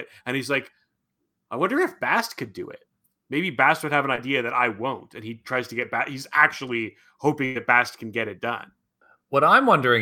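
At 4.15 s, running to 4.19 s, there is a short concealed packet loss: about 20 ms of the speech never reached the decoder in time, and the receiver papered over roughly 17 ms of it by extending the preceding sound before crossfading back. The result is a quick smear or wobble rather than a silence. Unlike a dropout or a hard edit, there is no click from a discontinuity.

From 7.45 s to 7.57 s a burst of packet loss takes out about 100 ms in a row. The concealment stretches the last sound for roughly 99 ms and fades it as the gap lengthens, so the sound hangs as a held, dimming buzz or hiss before the speech picks up again further along. What separates it from the earlier short loss is that a stretch of speech is actually gone, not just blurred.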